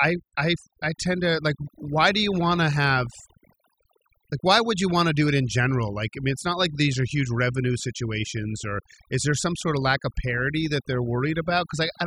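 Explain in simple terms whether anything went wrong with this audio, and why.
Something did go wrong: the whole clip suffers from overdone noise removal. A cleanup tool was set far too strong, so besides scrubbing away the background noise it also stripped out the softer parts of the speech. The gaps between phrases fall to an unnatural near silence dotted with faint twinkling specks. Unlike a muffled recording, which simply sounds dull, this one flickers and warbles because the tool keeps switching individual pitches on and off.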